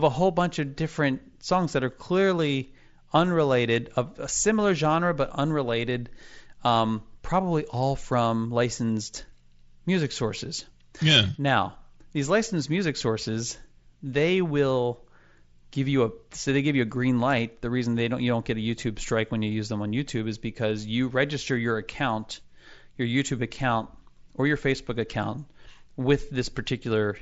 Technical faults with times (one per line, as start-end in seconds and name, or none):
none